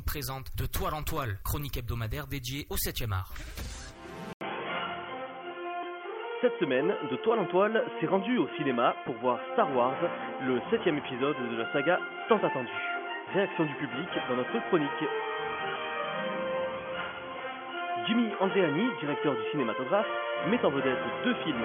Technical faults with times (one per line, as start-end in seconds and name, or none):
4.33-21.65 input switched to a poorer device